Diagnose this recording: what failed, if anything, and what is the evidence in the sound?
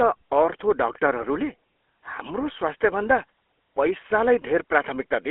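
The speech was carried through the GSM full-rate codec, a codec-stage fault present for the whole clip. The encoder reduces the voice to a vocal-tract filter excited by a regular pulse train. Only a decimated excitation is kept, which fits the 13 kbps full-rate scheme. The result is a plainly audible buzzy, gravelly texture on every voiced stretch. The band is held to roughly 300 Hz to 3.4 kHz, so the top end is gone.

GSM bit errors, a network-stage fault, hit the speech decoder twice: at 1.20 to 1.26 s and again at 3.89 to 3.93 s. Corrupted filter, pitch or gain parameters make the decoder rebuild those frames wrongly, so the spectrum bends or the level jumps. Each burst is heard as a brief squawk or gargle. Both bursts span a few 20 ms frames, and the first carries the denser run of errors, about 1.64% against 0.57%.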